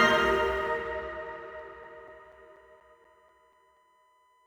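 A steady, thin whine sits at a fixed 1 kHz for the whole clip, roughly 35 dB below the audio. This is USB whine: the bus draws current in 1 ms frames, and that 1 kHz pulsing leaks through the power or ground into the analogue path. From 1.59 to 3.77 s there is also a regular run of ten short ticks, about four or five a second, the longest lasting around 10 ms. These are CD scratch ticks. Once per disc revolution, a scratch wipes out more data than error correction can rebuild, and the player patches over the lost samples.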